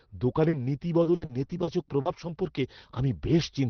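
From about 0.49 s to 2.29 s the speech breaks up with repeated packet loss, giving that robotic sound. Seven separate gaps land in that stretch, the longest about 60 ms, together about 280 ms, roughly a sixth of the span. Each hole gets patched by stretching out the last bit of sound, so you hear choppy stutters with chunks missing, all over the band-limited, roughly 6 kHz sound of an Opus call.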